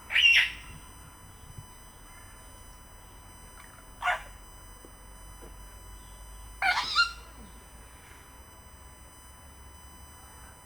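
USB whine runs through the whole clip, from start to finish, as a fixed-pitch tone sitting well under the sounds, roughly 20 dB below them. The USB bus draws current in bursts every millisecond, and that pulsing leaks through the shared power or ground into the audio path, producing a 1 kHz fundamental with a harmonic series above it. Here the strongest component is the ninth harmonic at 9 kHz, so the whine is heard as a thin, high, steady tone.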